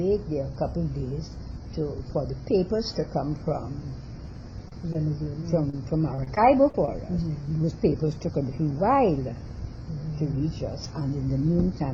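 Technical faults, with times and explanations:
4.68–5.74 s and 6.15–6.88 s: repeated packet loss (robotic sound). Short holes keep arriving, about six in the first run and five in the second. Each is patched by stretching the last bit of sound, so things turn choppy, worst in the second run where gaps reach 44 ms.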